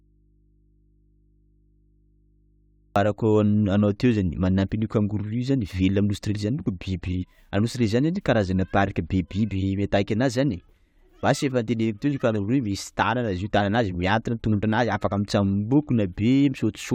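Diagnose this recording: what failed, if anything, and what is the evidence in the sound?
From the very start until 2.96 s the speech is missing, with only mains hum about 40 dB below the normal level, then it returns abruptly. That is an audio dropout to a faint residue, likely an intermittent analogue connection leaving the input open while the chain stayed live.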